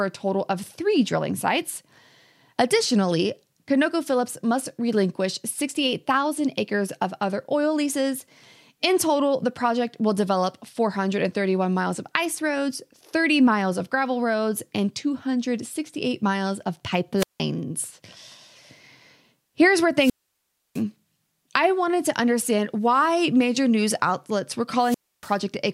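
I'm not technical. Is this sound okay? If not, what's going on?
No. There are three wireless microphone squelch dropouts, at 17.17–17.41 s, 19.97–20.83 s and 24.78–25.37 s. The radio signal faded, hiss rose, then the receiver muted the audio to near silence for up to 0.66 s.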